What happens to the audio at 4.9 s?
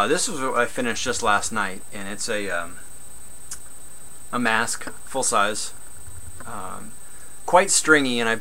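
Nothing goes wrong at 4.9 s; the audio runs straight through that moment without any dropout, click or other fault.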